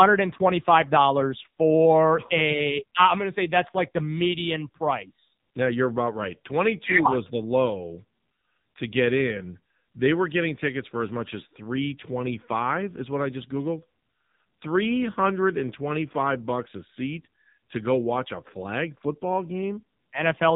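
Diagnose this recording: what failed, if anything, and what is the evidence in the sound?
The failure is at the codec stage: AMR narrowband mobile codec damage runs through the whole speech clip. Nothing passes above about 3.8 kHz, and the voice sounds heavily buzzy and synthetic, which fits a low AMR-NB mode near 6.7 kbps. A plain low-pass filter would dull the top without adding that vocoder-like texture.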